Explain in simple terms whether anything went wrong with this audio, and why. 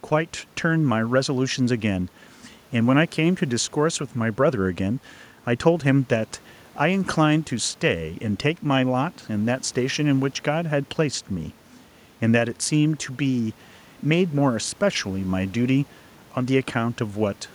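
Nothing went wrong with this speech recording. The faint background noise you can hear is just the normal sound of the room the microphone was in, sitting well below the speech, and not a problem with the recording system.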